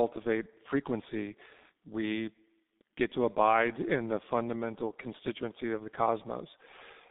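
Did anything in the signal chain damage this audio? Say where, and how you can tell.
Yes, at the codec stage: G.723.1 codec damage runs through the whole speech clip. The band stops below about 200 Hz and above 3.7 kHz, and the heavy coding leaves the voice muffled and hoarse, with consonants smeared. The texture fits a 6.3 kbit/s G.723.1 stream. The coder describes speech in 30 ms frames with a voice model that updates slowly, so fast detail between updates is lost.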